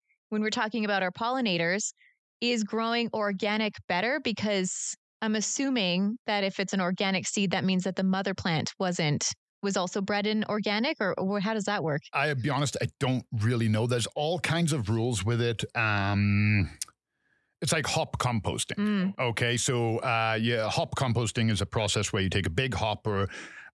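No technical faults can be heard anywhere in this speech recording. There are no events to place in time.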